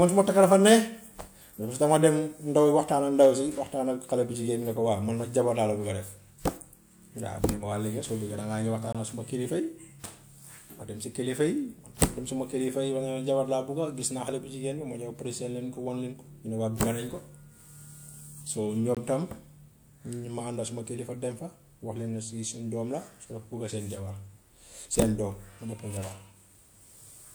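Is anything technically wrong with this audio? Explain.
Yes. There is a gap between chunks at 8.93 to 8.95 s and again at 18.95 to 18.97 s. Each is a hole of about 21 ms, spaced 10 s apart. Unlike a dropout, no sound is missing: the audio resumes exactly where it stopped.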